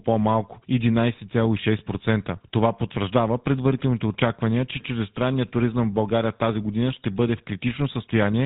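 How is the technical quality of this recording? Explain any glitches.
The technical quality is poor: the whole speech clip has passed through the GSM full-rate codec, and the damage is plainly audible from start to finish. The codec rebuilds each voice from a vocal-tract model driven by a sparse, regularly spaced pulse train, which gives the buzzy, gravelly roughness heard here, consistent with the 13 kbps full-rate mode. Nothing survives above about 3.8 kHz. That grainy buzz separates it from a simple low-pass filter, which would only dull the sound.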